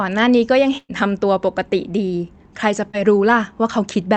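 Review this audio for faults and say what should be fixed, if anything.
Burst of packet loss, 0.77 to 0.91 s: about 120 ms was lost or arrived too late, so the receiver continued the last sound and faded it out, then 40 ms of silence.

Short concealed packet loss, 2.91 to 2.95 s: about 20 ms never reached the decoder, which continued the previous sound over the hole, leaving a brief smear.

Enabling Opus forward error correction and a slightly deeper jitter buffer on a less congested network would prevent both.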